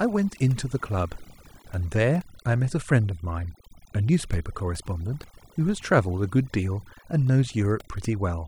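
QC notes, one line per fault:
Throughout: overdone noise removal. Noise reduction set far too hard has pulled individual frequency bands down or out whenever they sat near the noise estimate. So the background drops and breaks up into twinkling specks. On a spectrogram the noise floor shows as a blank field scattered with isolated bright dots, and the quiet speech detail has gaps cut out of it.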